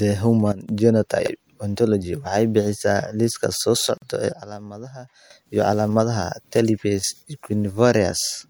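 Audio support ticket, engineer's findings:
Level drops by about 12 dB, with the noise floor falling with it, at 0.52–0.69 s and again at 4.32–5.30 s. Sudden gain jump, likely a digital gain setting or bit shift applied without a ramp, so the change lands between two samples.

Garbled, jumbled moment at 1.20–1.28 s. Chunks out of order: a block of roughly 21.3 ms plays about three chunks late, after audio it should precede. Nothing is missing, but three hard joins are created. Probable buffering or write-ordering fault.

Brief dropout at 3.98–4.02 s, a 44.5 ms gap with smeared edges; the sound resumes where it stopped. Gap at a join of encoded pieces: the timing fits pieces about 4 s long, encoded separately and concatenated untrimmed, so encoder delay and last-frame padding remain.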